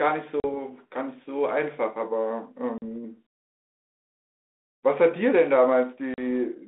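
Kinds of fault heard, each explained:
Packet loss on an ADPCM call, at 0.40, 2.78 and 6.14 s: each time about 40 ms of audio drops out as a hard-edged silent hole, roughly a couple of packets' worth. Because ADPCM sends only differences from an adaptive prediction, the decoder's predictor and step size lose track of the sender's during the gap, so the speech resumes with some distortion before settling within some tens of milliseconds.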